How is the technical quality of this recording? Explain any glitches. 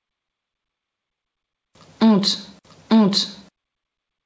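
The recording suffers from gain pumping across its whole length, heard through a call path whose band stops at 8 kHz, which fits G.722 at 64 kbps. Throughout the clip, the level swings by around 5 dB. The likely cause is input gain set far too high, with a fast limiter or compressor clamping down on every peak and releasing afterwards. The result is a squashed, breathing quality. Unlike a noise gate, the background never cuts to silence.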